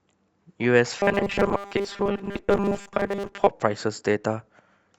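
From about 1.00 to 3.47 s the speech goes robotic, a stiff 200 Hz metallic buzz, likely from the last 5 ms buffer being repeated for most of that stretch.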